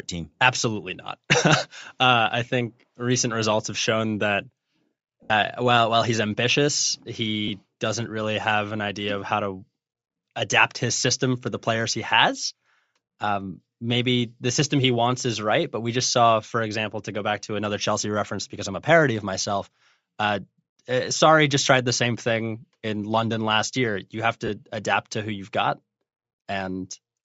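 Throughout the speech there is a breathy, grainy sheen on the upper frequencies. This is most likely Bluetooth LC3 compression, running at a rate that fits about 32 kbps with 10 ms frames. The codec discards much of the upper spectrum and fills it with shaped noise. That noise fill sets it apart from MP3-style swirling artefacts or a clean low-pass band limit: the top end is still there, but it is textured rather than detailed.

Lost LE Audio frames occur at 5.23 to 5.30 s, just before "while while he's ambitious". At 7.48 to 7.51 s there is another, between "while while he's ambitious" and "doesn't really have an". The last is at 24.47 to 24.50 s, just before "adapt to who you've". In each case the decoder repeated the last spectrum with scrambled phase. The gap becomes a brief noisy smear rather than the hard click or dead silence of a plain dropout. The 70 ms loss at 5.23 s sags as it fades.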